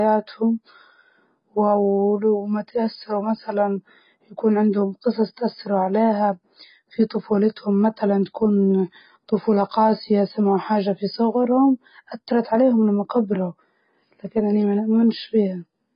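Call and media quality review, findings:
Likely AAC compression at a very low bitrate, throughout: heavy codec damage, nothing above 5.1 kHz, so speech sounds dull and smeared, with fizzy, warbling sibilants.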